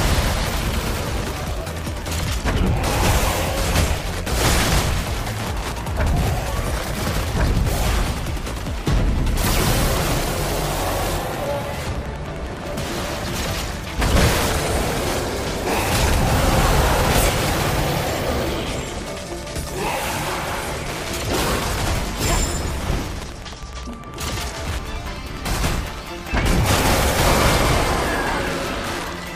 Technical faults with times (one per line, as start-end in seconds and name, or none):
0.00-29.35 Wi-Fi interference